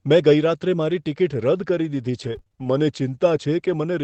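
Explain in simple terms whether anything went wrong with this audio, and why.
Two problems occur in this speech, both from data lost in transit over an Opus call link.

Between 2.11 and 2.66 s there is repeated packet loss (robotic sound). Six short dropouts, the longest about 31 ms, were each patched by stretching the preceding sound. Roughly a quarter of that half-second is filler, so the speech turns choppy and mechanical.

At 3.14 to 3.16 s, one 20 ms lost packet was rebuilt from error correction. The following packet carried a coarse backup copy, so no gap is heard, but that brief moment sounds rougher and noisier than the speech around it.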